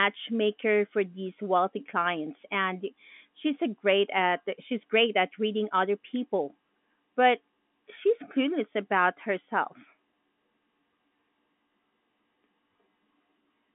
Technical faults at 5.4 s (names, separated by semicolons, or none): none